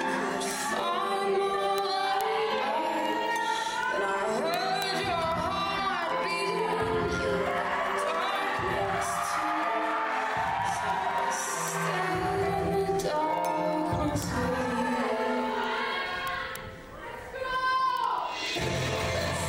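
An unlocked receiver clock, a few hundred ppm off, slips one sample about every 70 ms, giving steady word clock ticks from 0.16 to 19.45 s.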